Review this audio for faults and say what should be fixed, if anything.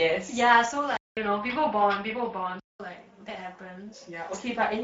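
Speex codec, throughout the clip: the speech has the hoarse, noisy texture of a CELP coder short of excitation bits, and nothing remains above 7.8 kHz. The coding damage is plainly audible, which fits a middle Speex setting of roughly 17 kbps. To prevent it, use a higher Speex quality setting or a modern codec such as Opus at the same rate.

Input switched to a poorer device, from 0.97 s to 2.80 s: a 200 ms silence opens the section, then the speech turns duller, with nothing above 5.4 kHz, a level shift of a few decibels and a new noise floor far below the speech. A change to another microphone or headset profile is the likely cause. To prevent it, lock the input device for the whole recording and disable automatic switching to headset call profiles.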